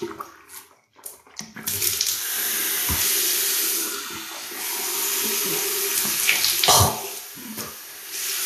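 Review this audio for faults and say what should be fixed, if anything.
Likely low-bitrate Vorbis compression throughout, with nothing above 14.2 kHz and coarsely quantised treble turning hissy and grainy, which points to roughly 37 kbps. Encode at a higher Vorbis quality setting, or keep a lossless master for review.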